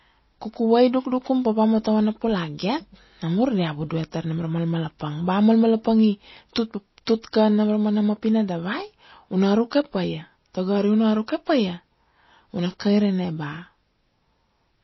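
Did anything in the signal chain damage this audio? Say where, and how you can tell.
Yes. At the codec stage, the speech was likely squeezed through low-bitrate MP3 compression, which fits roughly 24 kbps. The encoder cuts everything above 5.8 kHz for the whole clip and drops weak frequency lines frame to frame, leaving plainly audible watery, swirling artefacts throughout.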